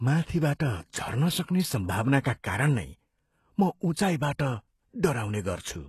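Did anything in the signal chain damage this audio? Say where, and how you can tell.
Yes, at the codec stage: the speech throughout has gritty, metallic sibilants and nothing above 12.3 kHz. This is likely HE-AAC compression at a very low bitrate, around 16 kbps. Band replication rebuilds the treble from copied lower bands, unlike a plain low-pass, which leaves dull treble.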